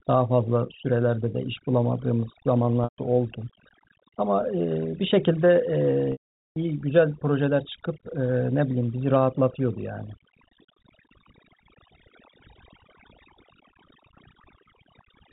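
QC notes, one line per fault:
Throughout: overdone noise removal. The noise reduction is set far too strong, so any frequency band it judges close to the noise floor is pushed down hard or cut out entirely. Quiet parts of the speech fall below that line and vanish with the hiss. Between phrases the background drops to near silence dotted with twinkling specks. The G.711 telephone band sits underneath, with nothing above 4 kHz.
2.84–2.98 s and 6.12–6.56 s: packet loss with pitch repetition. The audio is missing for 140 ms and then 440 ms, gaps that fit 20 ms packets. To cover each one, the receiver repeats the last pitch period and fades it out over about 50 ms. That gives a brief held, buzzy tone, then silence for the rest of the gap. The longer dropout at 6.12 s leaves a hole before the speech cross-fades back in.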